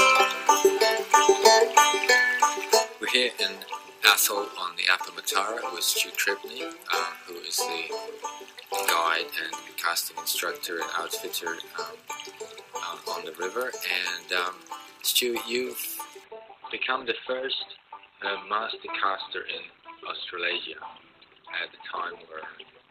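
From 16.24 s to the end at 22.90 s, the sound abruptly turns dull, with nothing above about 4.3 kHz and no gap at the switch. This is an adaptive stream at a lower bitrate: the player dropped to a leaner Opus version, consistent with a fall from about 64 to 12 kbit/s.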